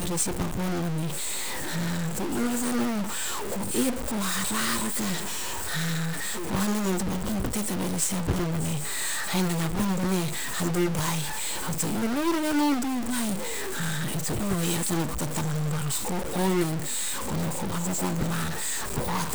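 From start to finish the speech carries a distortion, and even the pauses fill with a gritty noise floor. That's the signature of a stuck bit, likely a single data line held at one value, throwing about half the samples off by a fixed amount.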